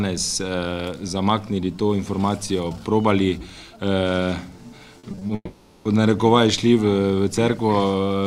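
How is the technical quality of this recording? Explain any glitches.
Two network faults degrade the recording, both packed into the second half.

From 4.99 to 5.31 s, repeated packet loss (robotic sound): five short gaps, each up to 40 ms, patched by extending prior sound, leaving a choppy texture across about 38% of the span.

From 5.35 to 5.87 s, the audio smears into a fading buzz, then brief silence, most likely a long network dropout; about half a second of material never returns.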